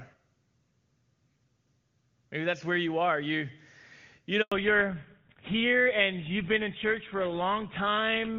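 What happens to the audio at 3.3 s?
Nothing goes wrong at 3.3 s: the speech passes through intact, carried cleanly by an AMR wideband (HD Voice) codec path at a rate that fits 23.85 kbit/s, with any coding damage faint at most.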